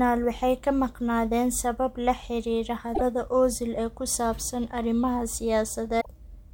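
Damaged data in a compressed stream hits twice in this speech clip, from 2.91 to 3.01 s and again from 5.97 to 6.06 s. In each spot some bytes of the encoded stream are wrong, so the decoder misreads the affected frames, loses its place and has to hunt for the next valid frame header before normal decoding resumes. Each event lasts roughly a tenth of a second and is heard as a short disruption in the speech.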